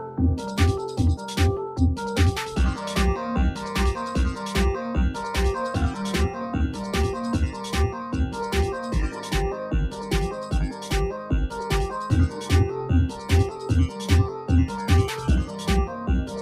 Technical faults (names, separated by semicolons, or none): noise suppressor applied to music or sounds; sound cut by the noise suppressor